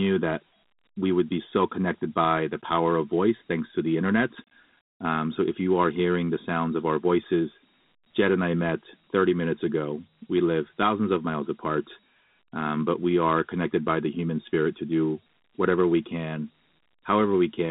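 Throughout, Dialogic VOX ADPCM leaves a gritty hiss riding on the speech, which points to 4-bit coding at 32 kbps, within a 150 Hz to 3.7 kHz band and nothing above 3.8 kHz.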